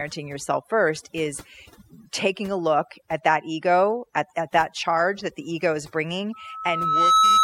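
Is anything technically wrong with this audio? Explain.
Yes, there are two problems.

Overdone noise removal runs through the whole speech clip. The denoiser was set too aggressively, so it cuts frequency bands that sit near its noise estimate and takes quiet parts of the voice with them. The background drops and breaks up into twinkling specks. On a spectrogram this appears as isolated flickering blobs where the noise floor should be.

A loudspeaker feedback squeal starts at 6.33 s, just after "that the ego is", and lasts to the end. The microphone is picking up its own loudspeaker, and at 1.3 kHz the loop gain exceeds one, so that tone feeds on itself. It swells over about 0.7 s to roughly 10 dB above the speech. On a spectrogram it is a single bright horizontal line, and on a waveform the envelope grows as it builds.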